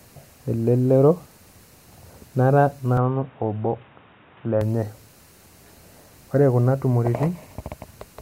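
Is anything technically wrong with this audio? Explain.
Yes. From 2.97 to 4.61 s the speech sounds as though the input switched to a poorer device, likely a change to a different, narrower-band microphone or a headset's call profile. That device passes nothing above 3.8 kHz, so the speech suddenly turns dull and boxy, and a faint new background noise sits well below it. The loudness barely changes and there is no gap at either switch, so the shift is heard purely as a jump in tone and clarity.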